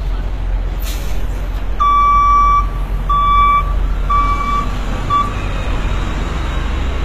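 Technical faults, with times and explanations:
Throughout: likely HE-AAC compression; the treble is copied up from lower bands and sounds gritty and metallic. A spectrogram shows repeated upper bands cut sharply at 14.9 kHz, consistent with about 20 kbps.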